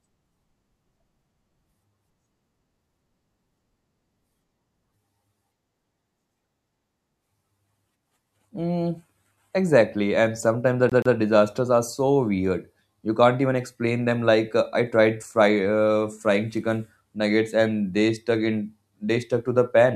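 At 10.90 s the speech hits a CD stuck on one turn. A scratch throws the laser back a track, so a 128 ms slice plays twice, with a brief mute at each jump, until 11.15 s. The even, fixed-length repeat sets it apart from irregular dropout glitches.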